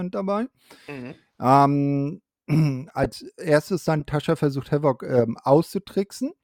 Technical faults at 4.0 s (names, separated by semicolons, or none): corrupt frame decoded